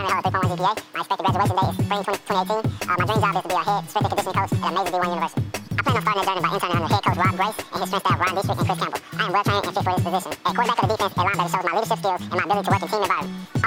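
From start to finish, the audio is read two samples at a time, so it plays at double speed. Everything runs twice as fast and sits a full octave high, a rise of 12 semitones. The reader treated each pair of samples as one frame. It likely assumed two channels, or samples twice as wide as they are.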